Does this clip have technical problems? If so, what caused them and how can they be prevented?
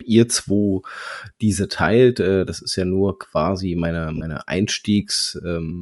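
Yes. The likely cause is Bluetooth LC3 compression at a modest rate, near 48 kbps, which thins the speech's upper spectrum and fills it with noise, giving a grainy, breathy edge throughout. Use a higher LC3 bitrate or a wired link.

Lost LE Audio frames around 4.17 to 4.23 s, just after "ja nur quasi meine", forced the decoder to repeat the last spectrum with scrambled signs, leaving a brief 40 ms noisy smear. Improve radio conditions by reducing distance and interference.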